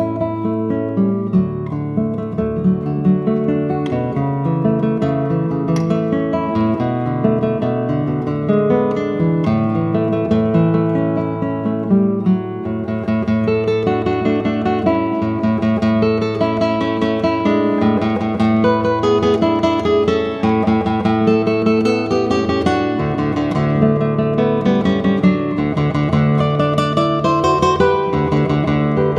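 From 0.13 s to 29.13 s there are clock slip clicks, a fast soft rattle of single-sample ticks about every 50 ms. The likely cause is two unsynchronised clocks differing by around 400 ppm, so one sample is dropped or repeated each period.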